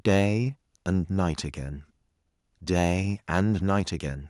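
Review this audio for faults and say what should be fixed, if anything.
Harsh, crackling distortion hits the loudest peaks at 0.06–0.26 s, 1.19–1.21 s, 2.76–2.92 s, 3.35–3.41 s and 3.69–3.80 s. The waveform tops are flattened about 1 to 4 dB beyond full scale, likely microphone overload from excessive input gain. Unlike codec distortion, the crackle follows only those peaks rather than colouring the whole signal. Setting the input gain so peaks stay several decibels below full scale would prevent it.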